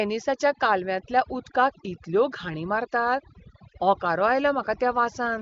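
Across the whole speech clip the background drops, dotted with twinkling specks, while the softer edges of the voice seem to dissolve. This is overdone noise removal. The noise reduction was set too aggressively, so every frequency band that dipped close to its noise estimate was pushed far down or removed, taking the quieter parts of the speech with it. The AMR wideband (HD Voice) codec path, whose clean sound points to one of its higher rates, cuts off everything above about 7.3 kHz.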